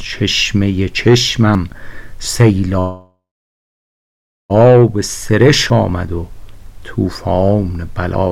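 At 1.55 s the audio skips forward. About 50 ms is gone, and the two sides join with no silence between them. This is audio missing between chunks. It is likely caused by a recorder or processor dropping a sliver while it closes one chunk and opens the next.

From 2.79 s to 4.52 s there is a call audio freeze. The last sound is held as a fading buzz or hiss, then drops to about 1.3 s of silence. Playback resumes where it stopped. Nothing is lost, but everything after now runs 1.7 s late. Packets were likely held up, and the jitter buffer ran empty.

At 5.70 s the same chunk skip returns. Again about 50 ms vanishes, and the edges are butted together.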